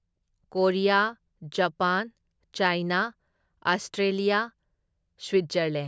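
No audible faults in this speech recording.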